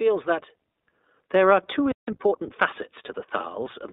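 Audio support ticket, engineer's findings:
iLBC codec throughout: narrowband voice codec codes each frame's excitation independently; band-limited to roughly 250 Hz to 3.7 kHz, with plainly audible roughness and synthetic edge on speech. Character fits 20 ms frames at around 15.2 kbps.

Playback stall, 1.92 to 2.08 s: output goes silent for about 163 ms mid-flow. Likely buffer underrun or blocked playback thread.

Time-compressed catch-up, 2.08 to 3.16 s: player trims backlog after the stall by excising and cross-fading short segments. Speech runs about 1.15x fast at unchanged pitch, until normal pacing returns.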